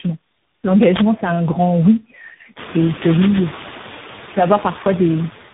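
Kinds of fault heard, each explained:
Noise suppressor artifacts: A noise-reduction stage lowers whatever it judges to be steady noise, cutting it by only about 4 dB. The residue dips between words and swells back under them. The room noise jumps sharply about halfway through.
Tandem speech coding: The call passed through several speech codecs in sequence, probably three separate ones ending on a CVSD link, and each recoded the previous one's damaged output. The speech sounds rough and muffled, with nothing above 3.8 kHz.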